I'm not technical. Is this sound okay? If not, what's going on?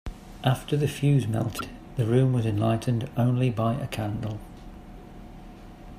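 No. Between about 1.56 and 1.61 seconds there is a brief glitch, a short blip or squawk lasting roughly a twentieth of a second. This is damaged data in a compressed stream: a small piece of the compressed file was corrupted. When the player reached it, it could not decode that stretch properly, lost its place, and had to search for the next intact section before the speech could continue.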